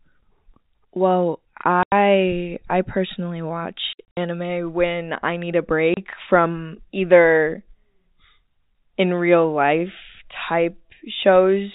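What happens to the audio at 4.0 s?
Right after "I personally", from about 3.93 to 4.17 s, there's packet loss filled with silence. Chunks of the stream went missing and the receiver dropped in silence instead of trying to conceal them. About 150 ms is gone in total, scattered across that 240 ms stretch, with the longest single gap at 60 ms. That points to packets of about 30 ms. You hear the speech cut out in hard-edged holes before it picks up at "when I need a".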